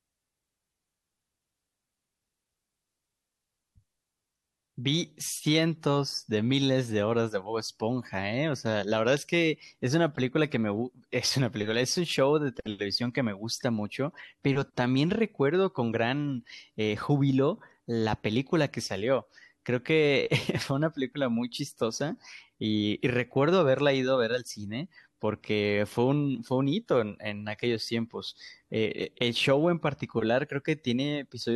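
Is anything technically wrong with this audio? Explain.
No, nothing is technically wrong with this audio.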